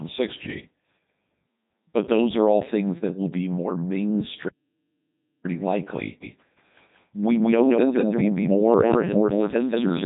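Robotic, buzzy speech runs through the whole recording, with nothing above about 3.8 kHz and heavy damage to the voice: the Codec 2 vocoder at 3.2 kbit/s discards the waveform, sending only pitch, voicing, energy and a spectral envelope, then rebuilds the voice from sine waves. From 6.23 s to the end, a doubled audio track appears abruptly, with a second full-band copy at roughly equal level trailing by about a fifth of a second without decay or room colour, likely from a slower second capture path or an edit holding two unaligned copies.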